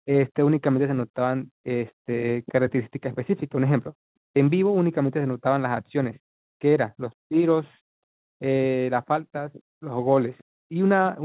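Nothing's wrong with this speech recording; it has come over a call connection, and since nothing reaches above 4 kHz, that fits an ordinary narrowband phone codec such as G.711 mu-law.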